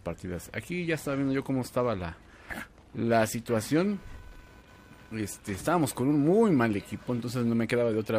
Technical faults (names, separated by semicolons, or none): computer activity noise